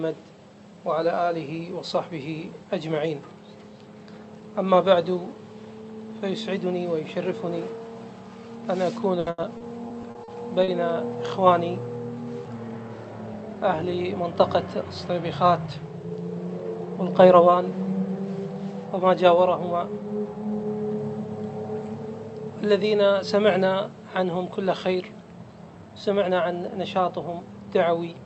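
From 9.19 to 10.71 s there is repeated packet loss, heard as a robotic sound. Packets kept going missing. Each hole was filled by extending the last sound. About 160 ms is missing, the longest gap 80 ms. The result is choppy.

From 13.27 to 13.91 s, and again from 25.75 to 26.30 s, there is jitter buffer speed-up. Too much audio had piled up in the buffer. The receiver trimmed short pitch-period slices, around 70 ms each time. Playback runs at 108% and then 111%. The pitch stays the same, but the sound feels hurried.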